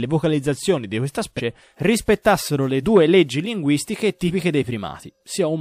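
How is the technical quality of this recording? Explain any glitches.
There's one glitch: compressed frames skipped at about 4.27 to 4.31 s, right after "due leggi linguistiche". About one frame, roughly 40 ms, never got played, likely because it was missing or the decoder rejected it as damaged. The speech jumps ahead at that point.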